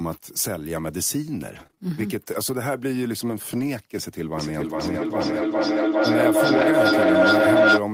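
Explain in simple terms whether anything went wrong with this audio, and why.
Repeated packet loss (robotic sound) affects the stretch from 1.51 to 1.79 s. Small chunks of the audio never arrived in time. There were several separate holes, none longer than about 23 ms. Each time, the receiver covered the hole by stretching out the last bit of sound it had. Because the holes come so close together, roughly a quarter of that short stretch is patched-over sound. It comes out choppy, with bits missing.

A lost packet rebuilt from error correction occurs twice: at 3.51 to 3.61 s, where about 60 ms was rebuilt, and at 6.57 to 6.63 s, where about 40 ms was rebuilt. Each time, a few pieces of audio were lost. The piece that followed each one carried a spare, lower-quality copy, and the receiver played that copy instead. There is no silence, but those moments sound rougher and noisier than the audio around them.

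A feedback echo between two devices runs from 4.38 to 7.89 s. Two devices in the same room were on one call. One played what the other's microphone sent, and that microphone picked it up again. Each device's echo remover only cancels its own playback, so the sound comes back about every 0.4 s. Here the loop is loud enough that the returning sound ends up stronger than the original. The repeats pile up instead of fading away.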